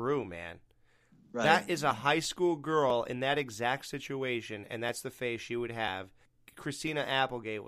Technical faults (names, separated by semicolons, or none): audio missing between chunks